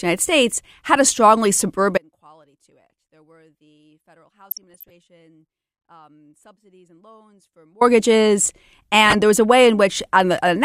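Audio dropout to a faint residue from 1.98 to 7.81 s, right after "had a strongly": the speech cuts abruptly to a faint residue about 35 dB down, likely signal loss ahead of a still-live path. DAB burbling at 4.48 to 4.90 s and 9.06 to 9.15 s, just before "there was a": bit errors slip past error correction, corrupting sub-bands into short blips of noise.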